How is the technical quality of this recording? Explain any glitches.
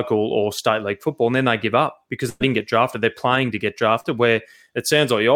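Two dropouts in transmission interrupt the speech.

From 2.29 to 2.42 s, just before "didn't get drafted", the sound stretches and fades, briefly drops out, then jumps ahead. This is a burst of packet loss: about 100 ms never arrived, so the receiver extended the last sound for roughly 108 ms while lowering it.

At 4.00 to 4.06 s, right after "playing to get", there is a brief smear. This is short concealed packet loss: about 40 ms went missing, and the decoder covered it with 36 ms of continued sound before blending back into the real audio.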